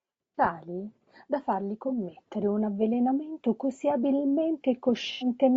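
Across the whole clip the speech sounds rough and grainy, most likely from low-delay AAC compression (AAC-ELD) at a rate that fits roughly 32 kbps. Its short frames blur pitch harmonics, so a spectrogram shows smeared harmonics, noise filling the gaps between them and a thinned, synthetic-looking top band.

AAC frame loss with concealment breaks in three times. At 0.36–0.38 s a brief smeared, noisy or phasey patch appears. At 1.88–1.93 s, between "da fargli" and "un avvelenamento così", another appears. At 5.12–5.26 s a longer one points to several consecutive lost frames. On a spectrogram each shows as a frozen, noisy copy of the preceding spectrum.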